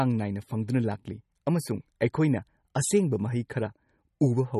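Throughout the speech, nothing sits above 12.4 kHz and plainly audible watery, swirling artefacts appear, likely from MP3 compression at a low bitrate around 32 kbps.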